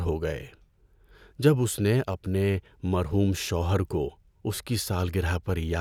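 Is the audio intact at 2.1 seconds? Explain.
No. Just after "جب اس نے", new audio arrived late, so from 2.12 to 2.14 s a repeated buffer replays the last 10.7 ms chunk (consistent with a 512-sample buffer) twice more. The sound becomes a brief buzzy stutter with hard joins, and nothing is lost.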